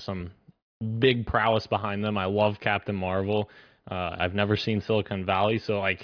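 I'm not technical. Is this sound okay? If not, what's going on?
Yes, nothing here sounds wrong, so there's no problem to track down.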